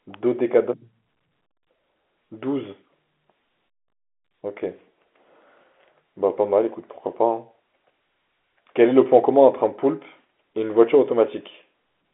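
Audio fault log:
No faults heard in this speech recording.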